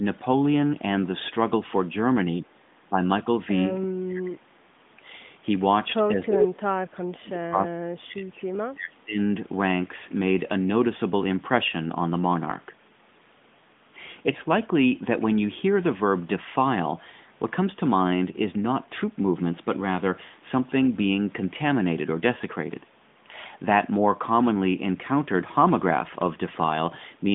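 A speech recording carried over a narrowband mobile line, with sound held to roughly 150 Hz to 3.6 kHz, keeps ducking in level: a shallow dip of about 10 dB at 2.4 to 2.66 s, a slight one at 2.9 s, then deep gaps of around 35 dB at 3.84 to 4.43 s and across 6.15 to 9.18 s. This is speech suppressed in double talk, most likely an echo canceller turning the talker down while the far side spoke. At 6.26 to 6.47 s an echo leak brings back a copy of the voice about 344 ms late at roughly equal loudness, probably loudspeaker pickup the far end's canceller failed to remove.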